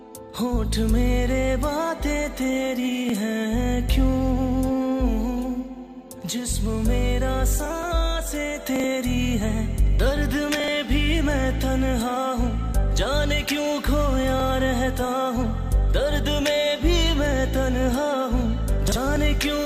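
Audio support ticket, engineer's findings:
Brief jumbled stutter at 8.76–8.84 s, 10.60–10.68 s and 18.88–18.96 s. Chunks out of order: in each, one 40 ms block plays one slot late, swapping places with its neighbour over an 80 ms span. Nothing missing, but three hard joins per event. Probable component: playback or write buffer queue reordering blocks.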